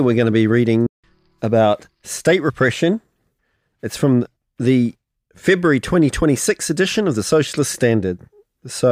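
There's a playback stall early on: at about 0.87 s the audio just cuts to silence for roughly 170 ms and then picks up again at 1.04 s. That's most likely the player running dry on data or its thread getting blocked briefly.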